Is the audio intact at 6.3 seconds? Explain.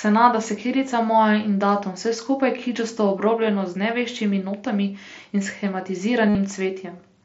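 No. From 6.29 to 6.35 s, about 60 ms, there is concealed Bluetooth headset packet loss. A run of voice packets never reached the phone, and the receiver filled the gap by repeating the best-matching recent stretch of waveform, roughly the last 20 ms. The result is a buzzy, held tone at full level, with a slight warble as real speech resumes. On a waveform the gap shows as identical repeating cycles with no dip in amplitude. A spectrogram shows frozen horizontal harmonic stripes, still capped near 8 kHz by the mSBC codec.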